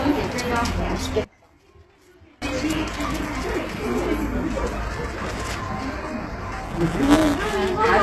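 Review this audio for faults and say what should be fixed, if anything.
The whole clip has the gritty, metallic treble of HE-AAC compression, likely a very low bitrate around 16 kbps, with nothing above about 12.3 kHz. The top end is rebuilt by copying lower bands upward, so those highs don't line up with the real harmonics. Encode at a higher bitrate, or use plain AAC, so the treble is actually coded.

From 1.24 to 2.42 s the level drops by about 29 dB, which points to one channel inverted. The shared centre content cancels when the channels are folded to mono, leaving only the faint side content. Check polarity on each channel before any mono sum.

From 6.63 to 7.55 s there's a robotic buzz at 172 Hz, and that's buffer tearing. It fits a 256-sample buffer where the writer and reader have slipped, so a small slice of each period repeats audio from roughly 10 ms earlier, with hard joins on both sides. 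Keep the write and read pointers apart and handle underruns so they can't cross inside a period.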